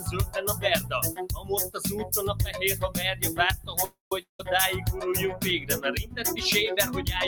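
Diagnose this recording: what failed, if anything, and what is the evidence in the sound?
Held sounds and tails pump and thin throughout, swinging by around 10 dB. A speech-tuned noise suppressor in the call processing is treating steady material as noise.

Noise-suppressor cuts cause short dips at 1.35–1.5 s, 3.57–3.74 s and 6.04–6.19 s, each about 150 ms and up to about 9, 10 and 11 dB. The suppressor briefly decided these sounds were noise.

A call audio freeze at 3.84–4.12 s fills with a fading buzz or hiss and then about 130 ms of silence. Playback resumes where it stopped, now 269 ms later, likely after a jitter-buffer underrun.

A long network dropout at 4.22–4.40 s brings a fading fill and then silence, and the audio returns with about 170 ms gone, likely from packets lost on the network.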